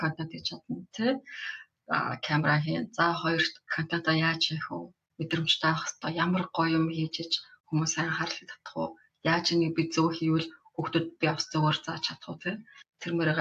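There are no technical faults to describe, so there is nothing to place in time order.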